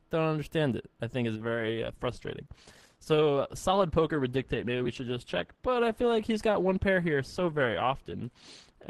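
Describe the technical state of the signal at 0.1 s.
At 0.1 s the signal is intact, with no audible fault at that moment.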